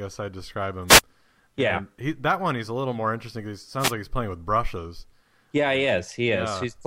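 At 0.87 to 1.01 s and again at 3.79 to 3.92 s, wireless microphone noise hits: the analogue radio link fades under reflection cancellation, letting receiver static swish briefly over the speech.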